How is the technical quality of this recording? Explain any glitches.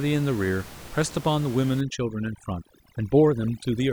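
The recording has one clear processing fault in its second half, while the room noise beneath the speech sits about 18 dB down before it. From 1.81 s to the end, overdone noise removal takes over: a noise reducer set far too aggressively clamps down on every frequency band it judges to be close to the noise floor. Quieter parts of the speech fall below that threshold and vanish with the room noise, so the background drops and breaks up into twinkling specks. On a spectrogram the smooth noise floor breaks into scattered isolated dots, with holes carved out of the fainter speech harmonics. On the waveform the gaps between phrases flatten.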